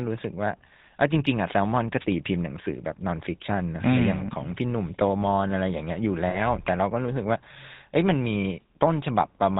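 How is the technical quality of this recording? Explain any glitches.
The recording has a coarse, band-limited telephone sound throughout, with two brief glitches.

The whole clip has a buzzy, gravelly roughness and no content above 4 kHz, plainly audible on the speech. This is the GSM full-rate codec, consistent with its 13 kbps mode. It models the vocal tract and excites it with sparse, regularly spaced pulses, so fine detail and the top end are discarded.

From 1.99 to 2.06 s there is a short swish of static over the speech, a wireless microphone noise hit. The FM radio signal faded as reflected paths cancelled, and receiver noise briefly rose before the signal recovered.

From 6.30 to 6.41 s the sound freezes into a rough, metallic ring, caused by lost GSM frames. Around 40 ms of data, which fits about two frames, was replaced by repeating the last good frame's settings, holding and smearing the sound.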